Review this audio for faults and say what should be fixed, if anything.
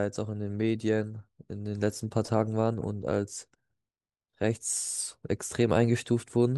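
Nothing here needs fixing; no faults turned up.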